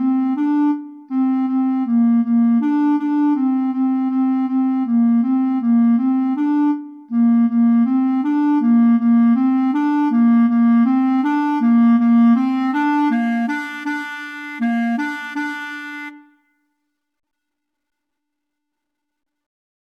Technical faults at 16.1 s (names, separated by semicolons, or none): none